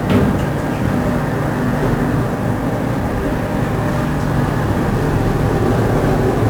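1-bit DFPWM compression runs throughout the clip. Each sample keeps a single bit that nudges an adaptive level up or down, and this heavy damage, consistent with a stream around 48 kbps, spreads dense broadband quantisation noise: fuzzy, crackling texture and treble swamped by hiss.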